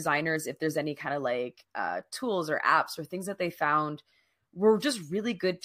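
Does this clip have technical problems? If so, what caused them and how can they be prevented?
No, nothing stood out on listening to this speech clip, so there is nothing here that needs a cause or a fix.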